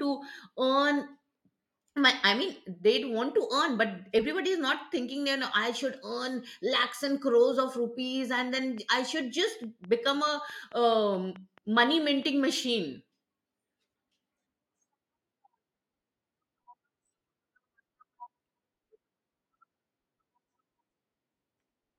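From 8.57 to 12.45 s, just after "rupees and", a regular train of clicks ticks at 4.65 per second, around twenty pulses roughly as loud as the speech, likely from interference or a faulty connection or power supply. Spectrogram: evenly spaced thin vertical lines. Waveform: matching sharp spikes.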